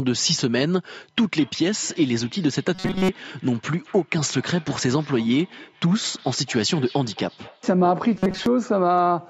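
From 1.18 s to 7.88 s the speech is followed by a feedback echo between two devices. A second device in the room replays this speech, this microphone picks it up again, and its own echo canceller cannot remove sound it did not play. Each phrase returns roughly a fifth of a second later, peaking at about 23 dB below the speech, thinner and ringier than the original. A spectrogram shows faint, blurred copies of each syllable trailing behind it at that spacing.

Within that stretch, from 2.75 s to 3.09 s, the sound turns into a rigid metallic buzz: robotic sound from repeated short buffers. Most of the audio in this window is a replay of a tiny fragment, likely because fresh audio arrived too slowly and the last few milliseconds were looped to fill the gap. The repetition imposes a fixed 188 Hz tone, which fits a fragment about 5.3 ms long. On a spectrogram this appears as flat, evenly spaced horizontal harmonics at 188 Hz intervals that ignore the natural pitch movement. 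In the waveform, identical short cycles repeat like a stamp.

The same buzz returns from 8.15 s to 8.46 s, again locked at 188 Hz and with the same striped spectrogram pattern. The call's microphone processing also shows in its high-pass filter: the lowest bass is taken out, which is normal.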